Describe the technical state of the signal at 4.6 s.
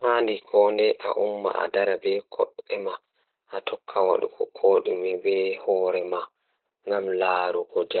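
At 4.6 s the speech carries Opus voice compression, present across the whole clip rather than at that moment alone. The codec is running its SILK linear-prediction coder in narrowband mode, so nothing survives above about 4.1 kHz, and the excitation is coded very coarsely, which fits a bitrate near 8 kbps. The damage is heavy: the voice sounds muffled and boxy, with a hoarse, slightly robotic grain.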